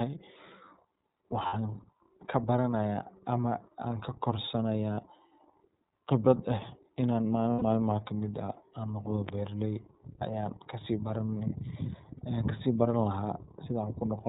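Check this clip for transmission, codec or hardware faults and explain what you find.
Two faults are present in the speech: iLBC codec coloring across the whole recording, and four short gaps from lost iLBC frames.

The iLBC codec damage runs throughout and is plainly audible. Everything above 4 kHz is missing, giving a narrowband telephone sound, and the voice has a slightly rough, synthetic grain. This comes from each frame's excitation being coded independently. The character fits iLBC's 13.33 kbps mode with 30 ms frames. A simple low-pass filter would sound dull but smooth rather than grainy, which separates it from this.

Lost iLBC frames occur at 1.46–1.54 s (about 60 ms), at 4.94–5.00 s just after "kabaranaya ama aan kakorsanaya" (30 ms), at 7.53–7.62 s just before "malmaha kamid" (90 ms), and at 12.17–12.21 s (30 ms). In each gap the decoder repeats the last pitch cycle mixed with noise, so you hear a brief held, buzzy vowel rather than silence or a stuttering repeat. 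Clean speech returns almost immediately afterward because iLBC frames stand alone.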